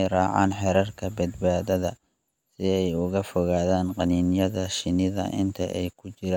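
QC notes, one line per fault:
No faults heard anywhere in this speech recording.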